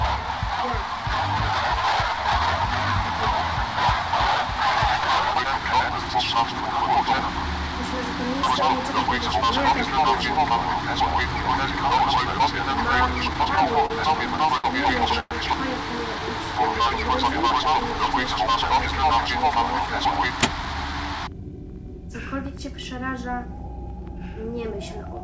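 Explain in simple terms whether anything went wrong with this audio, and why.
Three things go wrong. From 13.33 to 14.66 s there are repeated stalls (stutter): eleven brief hitches, none longer than 64 ms, where the last sound is stretched to cover late data, so the audio drags but nothing is lost.

At 15.20 to 15.33 s the sound hangs for about 0.11 s and then carries on exactly where it stopped. That single longer hold is likely a call audio freeze.

From 19.86 to 21.41 s a jitter buffer speed-up makes the audio run about 7% faster, trimming roughly a tenth of a second. The pitch stays the same, so it sounds hurried rather than higher.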